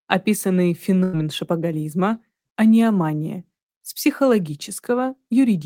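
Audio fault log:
1.03–1.15 s, burst of packet loss: consecutive packets never arrived in time, so the receiver stretched and faded the last sound for about 100 ms, then resumed with that stretch missing.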